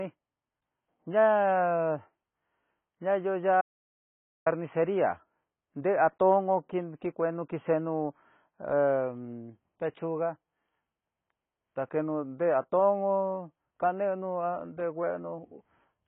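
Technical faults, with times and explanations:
Throughout: AAC compression. The speech is dull and muffled, with a swirling, watery texture on vowels and a fizzy smear on sibilants. There is nothing at all above 3.7 kHz, and the damage is heavy. That is likely low-bitrate AAC-LC, around 16 kbps, which lowers the cut-off and starves the remaining bands of bits. A spectrogram shows a hard ceiling at 3.7 kHz and patchy, blocky holes in the energy below it.
3.61 to 4.46 s: audio dropout to silence. The speech cuts off abruptly and returns mid-flow after about 0.85 s. The gap is digital silence with no room tone underneath, so whatever was said in that span is lost. The likely cause is that the input signal was interrupted while recording carried on writing zeros. The waveform shows a flat line, and the spectrogram shows a dark vertical band with sharp edges.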